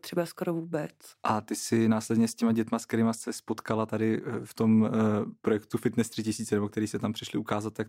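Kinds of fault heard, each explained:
No technical faults can be heard in this recording.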